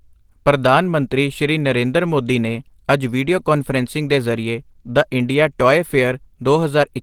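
Throughout, the speech has likely been squeezed through Opus compression at a low rate, which fits about 16 kbps in its hybrid mode. Short of bits, the encoder fills bands roughly, so the voice sounds plainly hoarse and grainy, though the band still extends to 20.2 kHz.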